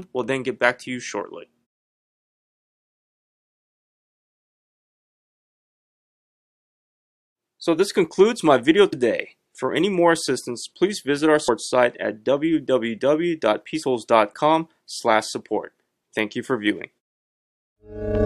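Brief glitches at 8.92 s, 11.47 s and 13.82 to 13.84 s come from damaged data in a compressed stream, where the decoder misreads corrupted frames and briefly loses sync.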